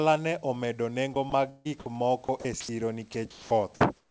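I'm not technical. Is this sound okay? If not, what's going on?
No. Three stretches, 1.14 to 1.91 s, 2.25 to 2.69 s and 3.13 to 3.51 s, sound choppy: this is sound chopped by the voice detector. Quiet bits of speech, about a quarter second or less each time, turn into a flat hiss, likely because the sender judged them silence. Unlike dropouts from a bad connection, the gaps are filled with hiss, not silence or glitches.

From 3.97 s to the end you hear comfort noise in place of the background. The room's real background noise gives way to a smoother, quieter, featureless hiss once the talking stops. Unlike a plain fade or mute, the hiss continues, just simpler and a little softer.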